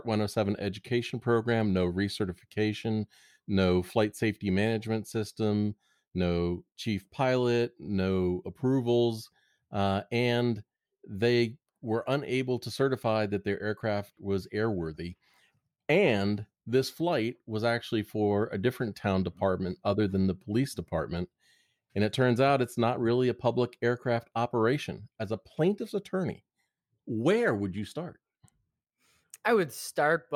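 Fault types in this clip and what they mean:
No technical faults can be heard anywhere in this speech recording. Nothing in the audio calls for a fault entry.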